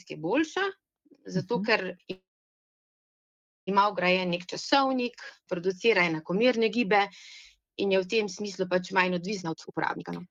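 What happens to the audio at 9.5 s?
A jitter buffer speed-up runs from 9.42 s to 10.30 s. The receiver, holding too much buffered audio, cuts out short pitch-period slices repeatedly, removing about 0.7 s. The sound plays at 175% speed with unchanged pitch, so it comes across as noticeably hurried.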